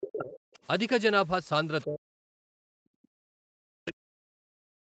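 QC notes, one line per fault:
0.54–0.58 s and 1.81–1.85 s, other side's voice leaking through: two brief, faint scraps of a second voice sit under the talker. The first is about 35 dB below the main speech and the second about 30 dB below. The likely cause is loudspeaker playback of the far end reaching the microphone, with the echo canceller leaving a small residue uncancelled for roughly 40 ms each time.
0–0.35 s, 1.85–2.79 s and 3.26 s to the end, speech suppressed in double talk: the talker's level sinks sharply in patches, dropping by about 35 dB in the first stretch and about 40 dB in the later two, so syllables thin out or break into fragments. The second run starts right where the 1.81 s leak ends. This is likely the echo canceller failing to separate near-end speech from far-end echo while both sides talked, and turning everything down.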